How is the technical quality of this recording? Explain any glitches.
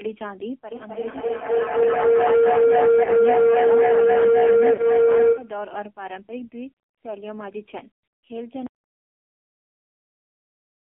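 The technical quality is poor. The speech was carried over a heavily compressed mobile link and has three short dropouts.

The AMR narrowband mobile codec affects the whole recording. Its low-rate vocal-tract modelling, consistent with about 5.9 kbps, makes the voice buzzy and synthetic. On a spectrogram, everything outside 250 Hz to 3.4 kHz is cut.

Lost AMR speech frames occur at 1.12–1.17 s, 3.04–3.10 s and 4.74–4.83 s. The decoder filled each gap by repeating the previous settings at falling gain. This causes brief warbles, and the longer last gap sounds like two lost frames. In the waveform, each one appears as a dip in level.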